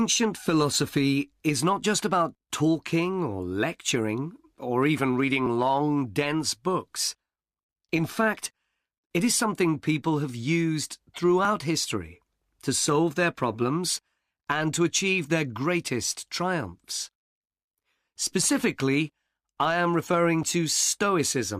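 A speech recording likely losing a few milliseconds each time it switches between 3-second chunks, audio missing between chunks, leaves tiny seamless skips at 5.46 s (after "or lecturing or even"), 8.46 s, 11.45 s and 20.43 s (after "I am referring").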